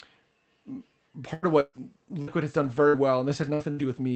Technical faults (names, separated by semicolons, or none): repeated packet loss (robotic sound); lost packet rebuilt from error correction; burst of packet loss